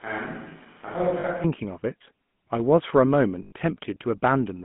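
GSM full-rate codec coding runs through the whole speech clip. The voice has been squeezed through a vocal-tract model driven by sparse pulse excitation, giving a buzzy, gravelly roughness at a rate that fits 13 kbps, confined to a line band of about 150 Hz to 3.4 kHz.

From the very start until 1.44 s, the sound is roomy, hollow and thin in the bass, about 5 dB quieter, with room noise only about 25 dB below the speech. That most likely points to a switch to a distant microphone, with the close signal missing until the abrupt change back at 1.44 s.

Lost GSM frames hit at 1.20 to 1.25 s and again at 3.42 to 3.52 s, about 40 ms and 100 ms. Each gap is filled by repeating the last good frame's settings, heard as a brief rough, metallic ring.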